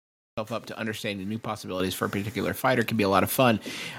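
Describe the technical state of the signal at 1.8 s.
At 1.8 s there's a microphone volume stepped up event: the whole signal jumps by about 7 dB in a single step. It sounds like the call software decided the mic was too quiet and bumped the device's input volume all at once instead of easing it up. Because the change happens before any processing, the speech and the background noise both get louder together, so the room tone rises right along with the voice.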